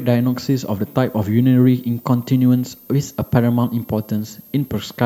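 A switching supply whistle runs through the whole speech clip: a thin, high tone wandering between 12.4 and 14.6 kHz, about 30 dB below the speech. A switching power supply cycling at an audible rate is leaking into the audio path.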